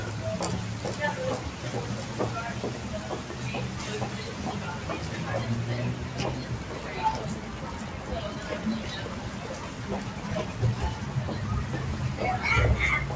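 A noise suppressor built for speech stayed active on a recording of sounds, treating steady sound and ambience as noise, so level drops by around 5 dB as sustained parts and tails fade, making the sound pump and thin throughout. Nothing reaches above 8 kHz, consistent with a wideband call codec such as G.722.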